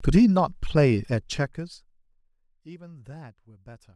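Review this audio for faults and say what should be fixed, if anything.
Zipper noise runs from 1.11 to 2.30 s, while the speech level drops by roughly 25 dB. Instead of gliding, the gain moves in 2 dB jumps, about fifteen per second, and each jump is an abrupt discontinuity in the waveform that produces a small click. Strung together, these clicks form an audible ticking that rides on the speech for the length of the fade. To prevent it, interpolate the gain per sample, or ramp it across each buffer, rather than applying stepped values.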